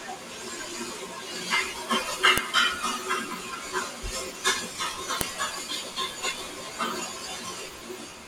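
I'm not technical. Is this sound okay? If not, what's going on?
No. There is a file header played as audio, heard as a sharp snap at 2.38 seconds and again at 5.21 seconds in this speech. The recording appears to be made of separate pieces stuck together, and each piece still carried a short block of file information at its start. That information was never meant to be heard, but it got played as sound anyway, causing the sudden click where each new piece begins.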